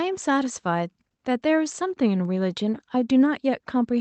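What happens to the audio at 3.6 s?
Nothing goes wrong at 3.6 s: the speech carries on intact through that moment, with only the ordinary band-limited character of the call path around it.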